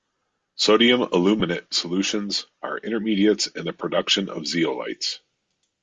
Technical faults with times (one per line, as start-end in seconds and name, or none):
none